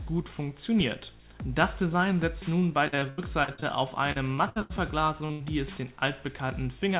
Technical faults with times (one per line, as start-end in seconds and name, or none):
2.60-3.64 repeated packet loss (robotic sound)
4.12-4.72 repeated packet loss (robotic sound)
5.26-5.31 short concealed packet loss
5.31-5.42 burst of packet loss